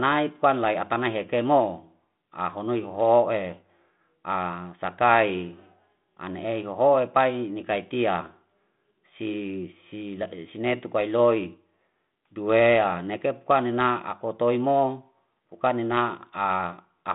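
No technical faults can be heard anywhere in the speech.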